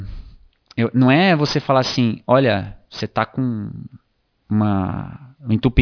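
Throughout the speech, aliasing: the audio was downsampled without an anti-alias filter, pointing to a drop to around 11 kHz, so content above 5.5 kHz folds back as false, unrelated tones roughly 15 dB below the speech. Sibilants sound gritty and metallic.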